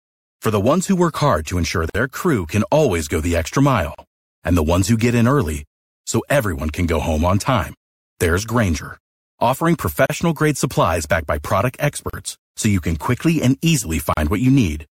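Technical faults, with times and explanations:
1.90–1.95, 3.95–3.98, 5.98–6.02, 10.06–10.10, 12.10–12.13 and 14.13–14.17 s: gap at a join of encoded pieces. The speech drops out for 50 ms between "work hard to ensure" and "crew can always go", then 38 ms at the others (after "who get in early", before "grade supplies backed by"). The spacing of roughly 2 s matches separately encoded segments joined untrimmed, their encoder delay and final-frame padding leaving silence.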